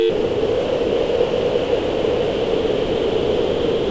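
From 0.10 s until the clip ends at 3.90 s, the sound gives way to steady, featureless noise. This is likely sound dropped by the voice detector, which treated it as background and stopped sending, so comfort noise filled in. A spectrogram shows an even noise band with no structure, topped at 8 kHz by the G.722 call path, and the waveform stays low and flat.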